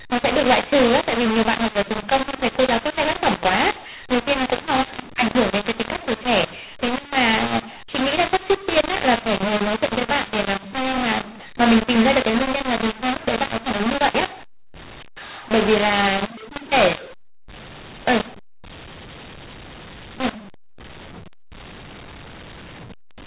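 Throughout, the mu-law and A-law are mixed up. Speech coded as mu-law is decoded as A-law. Levels scramble, the speech turns harsh, and pauses fill with noise.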